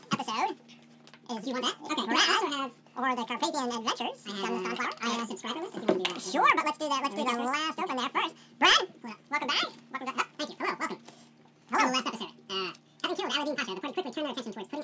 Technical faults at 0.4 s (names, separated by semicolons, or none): wrong sample rate